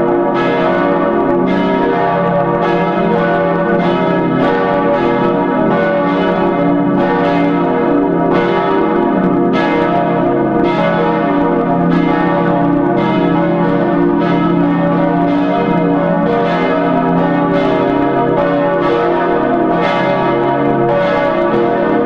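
No dropouts, distortion, noise bursts or other technical faults can be heard at any point in the audio.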